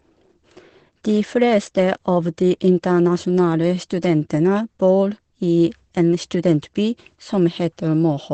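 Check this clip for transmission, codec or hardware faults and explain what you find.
One codec fault runs through the whole clip. Opus compression, throughout, is the likely cause: the speech sounds heavily muffled and hoarse, with nothing above 8.8 kHz. This fits the encoder's SILK speech mode at wideband, near 12 kbps, modelling the voice coarsely.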